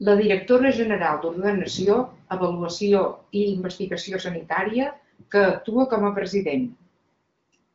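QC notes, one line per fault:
Nothing to flag here: the speech runs through the AMR wideband (HD Voice) codec with nothing above about 7.7 kHz, and the detail heard fits its 23.05 kbit/s rate.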